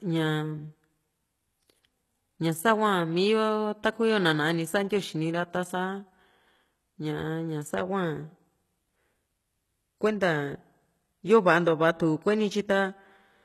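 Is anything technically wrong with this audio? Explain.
Yes. Throughout the speech there is plainly audible HE-AAC compression damage, with nothing above 12.3 kHz. The likely cause is spectral band replication: treble copied up from lower bands, not coded. S sounds turn gritty and metallic. This fits a very low bitrate, around 16 kbps.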